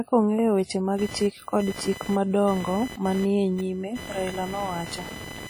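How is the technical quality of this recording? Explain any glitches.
The recording quality is poor, with heavy codec damage throughout and an added electrical interference from about 0.98 s onward.

Throughout, the speech is ringing and washy, with hiss that breathes along with it. This is likely WMA compression at a low bitrate near 32 kbps. On a spectrogram, onsets look smeared in time.

From 0.98 s to the end, computer activity noise sits roughly 15 dB below the speech as a buzz pulsing around 1 kHz. Processor or peripheral load disturbs the audio ground. It shows as a horizontal line near 1 kHz that comes and goes with the computer's activity.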